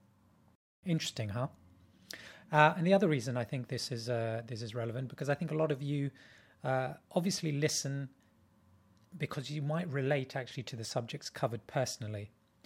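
At 0.55 s the speech cuts to silence for about 275 ms, resuming at 0.83 s: a playback stall, likely the player running short of data.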